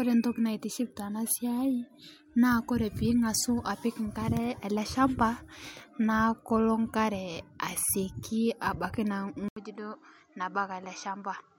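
At 9.48 s the speech cuts out for about 80 ms. When it returns, it sounds duller and a little boxy, and it stays that way to the end. Nothing above 8.2 kHz comes through now. The level falls by roughly 5 dB. A faint new noise floor sits far beneath the speech. This is likely an input switched to a poorer device, with the system moving to a narrower-band microphone or headset mid-recording.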